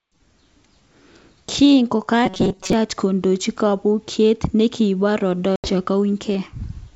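Robotic sound from repeated short buffers runs from 2.26 to 2.73 s in this speech clip, just before "kodochi kobokyinet nekibo". New audio was arriving too seldom, so playback kept refilling the gap by looping the last few milliseconds while roughly two-thirds of the real signal was skipped. The loops impose a steady 188 Hz buzz, which fits a buffer of about 5.3 ms, and the voice turns metallic and rigid. The likely cause is buffer underruns in the playback path. Packet loss on an ADPCM call follows at 5.56 to 5.71 s, right after "kodochi kobokyinet nekibo". About 80 ms of audio, consistent with a few lost packets, drops out as a hard-edged silence. The decoder's adaptive predictor and step size then no longer match the sender's, so the returning speech comes back with a brief click or distortion while the two resynchronise over the next tens of milliseconds. The underlying G.722 wideband coding keeps speech clear up to 7 kHz.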